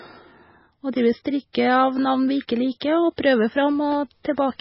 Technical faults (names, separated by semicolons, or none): MP3 compression; pre-echo